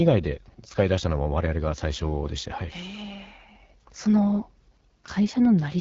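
Throughout, AMR wideband (HD Voice) coding leaves the speech rough and raspy, with nothing above 7.5 kHz; the plainly audible damage fits an 8.85 kbit/s mode.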